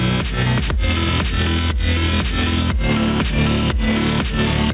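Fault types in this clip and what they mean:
gain pumping: the gain ducks by roughly 5 dB under each loud sound, likely a limiter fighting gain set too high.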